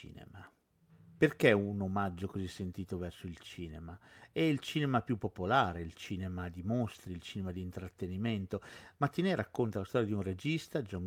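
A lost packet rebuilt from error correction occurs in this speech clip at 6.95 s, between "popolare il cinema di" and "il cinema di intrattenimento". There is no gap. A brief stretch of about 20 ms, which fits a single lost 20 ms packet, sounds rougher and noisier. That is because the decoder filled the missing frame with the reduced-quality copy carried inside the following packet, Opus in-band forward error correction, rather than the original full-quality data.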